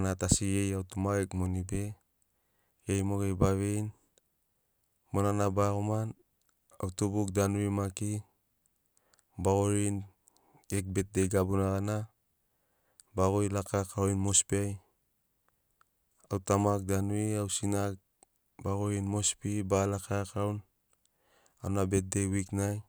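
No technical faults can be heard anywhere in the speech. Nothing in the audio points to a problem with how it was captured or passed along.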